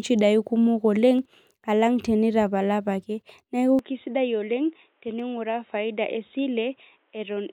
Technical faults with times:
1.19 dropped samples
3.79-7.52 input switched to a poorer device
5.20 dropped samples

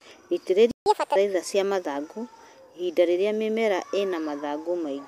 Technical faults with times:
0.71-0.86 playback stall
0.86-1.16 catch-up at higher speed

